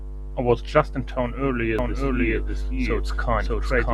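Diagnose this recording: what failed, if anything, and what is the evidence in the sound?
A doubled audio track appears from 1.79 s and runs to the end: a second, full-band copy of the speech sits roughly 0.7 s behind the first, at about the same loudness. It cuts in abruptly, with no decay or room colouring. It is a clean duplicate, not an echo. The likely cause is a second capture of the same signal through a slower path, or an edit at the storage stage that left two misaligned copies mixed together.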